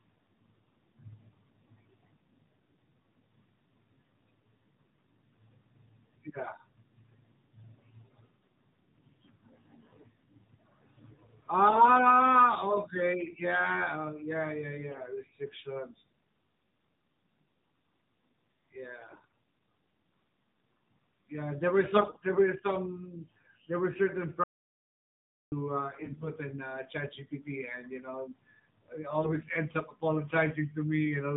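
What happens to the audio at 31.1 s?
At 31.1 s the speech sounds thin, buzzy and somewhat synthetic, with nothing above 4 kHz, as it does throughout the clip. This is AMR narrowband mobile codec damage: the voice is rebuilt from a vocal-tract model and sparse pulses, and the plainly audible artefacts fit a low rate of about 7.4 kbps.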